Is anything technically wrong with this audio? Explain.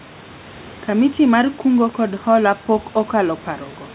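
No, the speech sits about 26 dB above a background of room noise, and its band ends at 4 kHz, as expected from a narrowband telephone codec such as G.711 mu-law on a call path.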